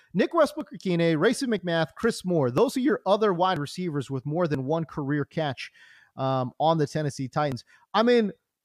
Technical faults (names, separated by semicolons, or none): overlap between stream segments